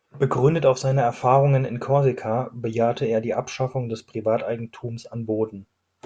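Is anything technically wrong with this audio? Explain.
No, nothing technically wrong can be heard here.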